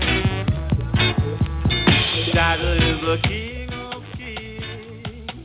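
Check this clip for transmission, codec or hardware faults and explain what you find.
Nothing stood out on listening to the clip.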